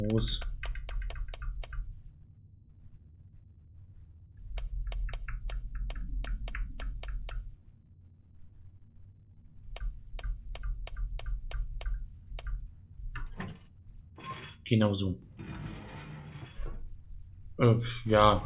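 Nothing in the signal points to a technical fault at any point in the recording.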